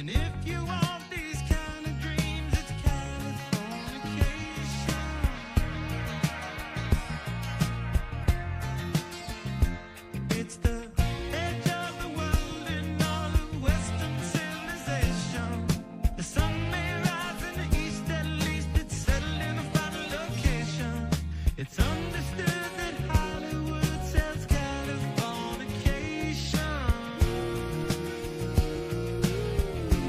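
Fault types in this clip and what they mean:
Phantom power thump: a supply voltage was switched on a live input, and that sudden DC step passed through the coupling capacitors into the signal, heard as a low thump at 27.84 s, peaking around -31 dBFS and dying away within about 37 ms.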